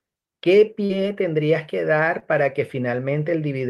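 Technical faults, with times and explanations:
0.85–0.91 s and 2.19–2.23 s, short concealed packet loss: about 40 ms and 20 ms of speech arrived too late, so the receiver extended the preceding sound and blended back, leaving brief smears.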